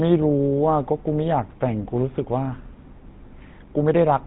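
GSM full-rate codec damage runs through the whole speech clip. The codec rebuilds the signal from a vocal-tract model driven by a sparse, regularly spaced pulse excitation, so the fine detail of the original waveform is replaced by an approximation. That gives the audio a plainly audible buzzy, gravelly roughness. Nothing survives above about 3.9 kHz, leaving it narrow and dull, and the data rate it points to fits 13 kbps.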